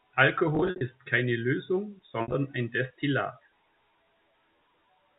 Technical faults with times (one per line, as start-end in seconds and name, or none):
0.55-0.81 packet loss with pitch repetition
2.22-2.34 packet loss with pitch repetition